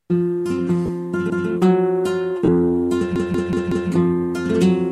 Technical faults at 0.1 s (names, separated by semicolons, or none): none